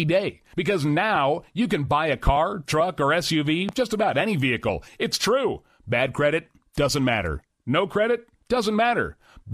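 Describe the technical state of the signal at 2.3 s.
A loud pop runs from 2.27 to 2.31 s, a single sharp thump about 10 dB above the speech. It likely comes from a brief voltage spike.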